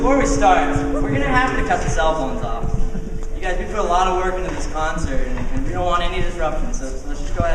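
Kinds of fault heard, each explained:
No technical fault can be heard anywhere in the audio, and the signal holds steady throughout without any dropout, distortion or interruption.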